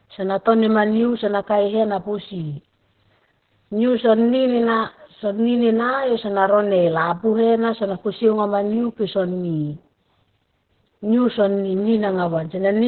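Opus voice compression runs through the whole speech clip, heavily damaged. The coder sounds like it is in its SILK linear-prediction mode at narrowband, which fits a rate near 8 kbps: nothing survives above about 4.2 kHz, so sibilants and consonant edges are gone and the voice sounds muffled and telephone-like. Coarse coding of the excitation adds a hoarse, slightly robotic grain; the codec works in 20 ms frames.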